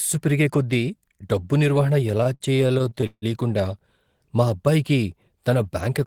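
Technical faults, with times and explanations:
2.07–3.25 s, repeated stalls (stutter): the jitter buffer ran dry 16 times, stretching the speech by about 0.43 s with no loss; the spectrogram shows smeared, repeated frames, the waveform fading dips up to 156 ms.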